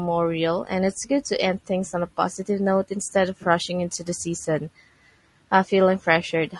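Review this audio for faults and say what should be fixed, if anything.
Low-delay AAC compression runs throughout. The speech sounds rough and grainy, with noise between harmonics. Likely AAC-ELD, whose short frames blur pitch, at a rate fitting about 32 kbps. Raise the bitrate or use a longer-frame codec.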